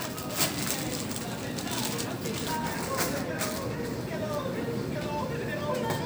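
No technical faults can be heard anywhere in this sound recording; the signal stays intact and continuous throughout.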